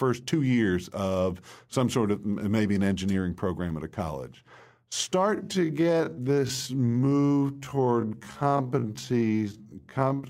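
At 5.29 s the pace suddenly drops to about 0.55 times normal speed and stays there to the end, with the pitch unchanged. It's a time-stretched section, likely from software repeating short slices of the speech to pad its length, which makes it drag.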